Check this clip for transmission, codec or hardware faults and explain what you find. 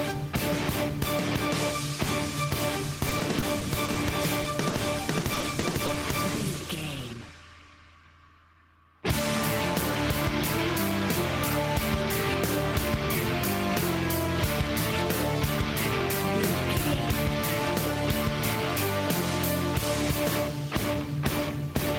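The clip has two kinds of network fault: repeated packet loss in two stretches, and one isolated short concealed packet loss between them.

From 3.09 to 3.97 s, and again from 5.34 to 5.97 s, there is repeated packet loss (robotic sound). The first stretch has about six gaps and the second about five, none longer than 30 ms. Each time data arrives too late, the receiver covers the hole by extending the last sound. It papers over roughly 100 ms in the first stretch and 90 ms in the second, but 40 ms and 80 ms are still lost outright. The holes come in quick succession, so the patched sound turns choppy and robotic, with small pieces missing. What separates this from a single dropout is the rhythm: the damage recurs across most of a second.

At 4.70 to 4.74 s there is a short concealed packet loss. About 20 ms is filled by continuing the preceding sound from its pitch or as shaped noise, then blended back into the real signal, and roughly another 20 ms is simply missing. 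It registers as one brief smear or wobble, not a stuttering run. Because it is isolated, it never takes on the robotic quality of the two longer stretches.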